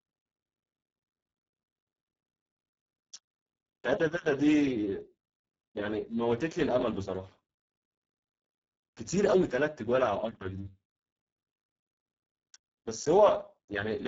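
From start to finish the speech sounds hoarse, grainy and buzzy, with a robotic edge and nothing at all above 7.7 kHz. This is heavy Speex codec damage. The codec models the voice with a predictive filter plus a sparse excitation signal, and here so few bits reach that excitation that the rough, machine-like texture fits a very low bitrate of around 6 kbps.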